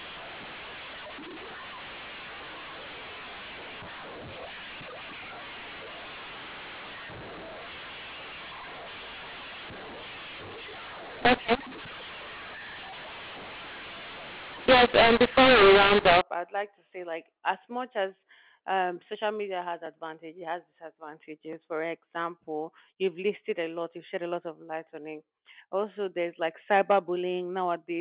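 From 0.0 to 16.2 s, mu-law telephone audio is decoded as A-law, a mu-law and A-law mix-up that scrambles sample levels. The speech turns harsh and distorted, with the quietest moments lifted into noise, until it clears just before "I'd like to say".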